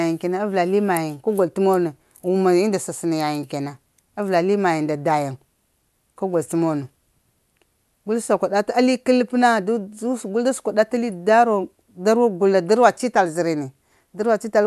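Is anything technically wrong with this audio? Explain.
No, nothing technically wrong.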